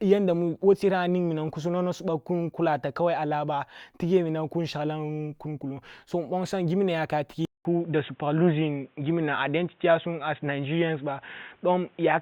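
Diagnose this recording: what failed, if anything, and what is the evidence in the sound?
The input likely switched to a poorer device at the driver level. After "so nbonsam giminna yaka", at 7.45 s, a 200 ms silence occurs. The speech then turns dull, with nothing above 3.8 kHz. A new noise floor appears, about 40 dB down. Loudness barely changes.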